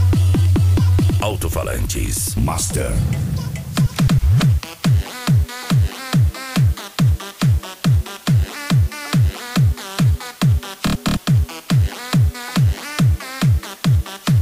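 Low bit depth with dither runs through the whole clip, from start to finish. The audio carries only about 6 bits of resolution, and dither was added before each sample was rounded to those coarse steps. This decorrelates the rounding error from the signal, so instead of gritty, signal-following distortion the error becomes a steady white-noise floor sitting only about 25 dB below the material. It is heard as a constant, even hiss under everything, with no crunch or breakup.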